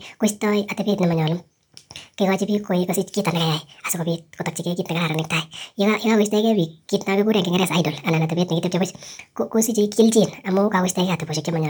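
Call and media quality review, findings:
Wrong sample rate, whole clip: speech runs 1.5x fast and sits about 7 semitones high, fitting 32 kHz audio played at 48 kHz without conversion. Unlike a pitch shift or time-stretch, tempo and pitch move together by one ratio.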